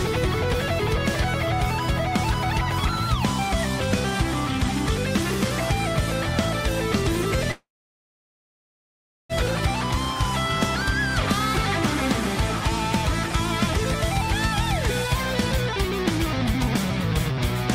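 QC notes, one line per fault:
7.51–9.32 s, call audio freeze: sound stalls into a short fading tail, then about 1.65 s of silence, and resumes where it stopped, likely from delayed packets draining the jitter buffer.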